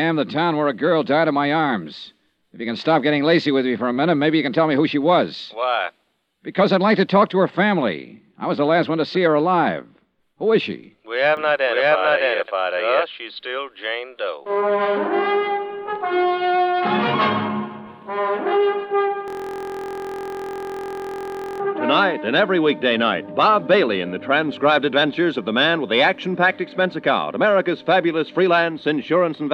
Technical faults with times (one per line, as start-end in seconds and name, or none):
11.37-13.05 doubled audio track
19.28-21.60 system hang loop